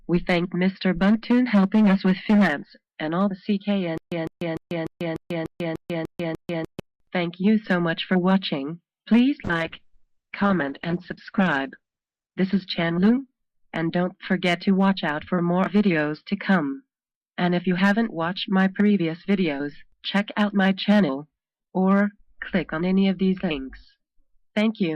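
From 3.98 to 6.80 s there is a stutter with silent gaps: a 154 ms fragment repeats at an even 297 ms pace, separated by about 142 ms of digital silence. This is likely a stalled player retrying. The waveform shows identical blocks alternating with flat silent stretches, and the audio that should have played in that span is lost.

From 9.47 to 14.89 s a call bitrate drop takes the encoder from 128 kbps down to 10 kbps, holding at the lowest rate for 2.1 s. The sound turns coarse, watery and muffled. On a spectrogram the band shrinks from 20 kHz to 8 kHz, with a hard ceiling until the rate recovers.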